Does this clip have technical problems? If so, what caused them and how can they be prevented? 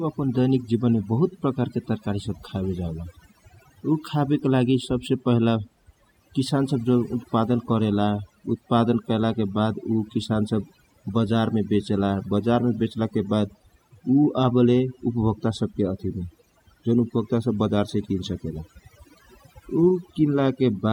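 Yes. Overdone noise removal runs throughout: a noise reducer set too strong drops frequency bands near its noise estimate, taking quiet speech with them. The background drops and breaks up into twinkling specks. Gentler reduction settings prevent it.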